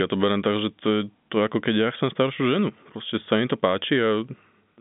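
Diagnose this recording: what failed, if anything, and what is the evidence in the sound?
Nothing has failed: the speech arrives as ordinary narrowband G.711 telephone coding, with energy confined to a line band of roughly 150 Hz to 3.6 kHz, nothing above 3.7 kHz, and at most a faint coding texture riding on the voice.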